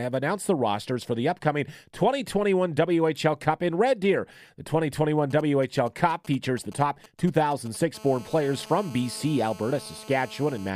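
From 5.31 to 7.77 s, GSM signalling bursts: a nearby 2G phone's intermittent radio bursts, rectified by the audio circuit, give galloping ticks and brief 217 Hz buzzes, roughly 20 dB under the speech. From 7.95 to 10.70 s, GSM phone buzz: the phone's continuous call transmission, pulsing 217 times a second, produces a steady raspy 217 Hz buzz, rich in harmonics, about 21 dB below the speech.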